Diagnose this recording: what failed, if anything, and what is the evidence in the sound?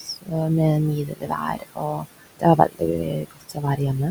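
Noise suppressor artifacts are present throughout the clip, at the call-processing stage. The room noise, sitting about 15 to 16 dB below the speech, does not hold steady. It is pulled down in the gaps and comes back up under the speech. That pumping is the signature of a suppressor applying per-band gain on short frames, estimating the noise anew each time.

Speech cut by the noise suppressor occurs from 0.0 to 0.35 s and again from 0.93 to 3.8 s, in the same call-processing stage. Across these spans parts of the speech are pushed down by about 20 to 21 dB at worst, roughly a third of a second in the first span and about two seconds in the second. Quiet consonants and word endings sound swallowed because the suppressor misread them as noise and attenuated them along with it.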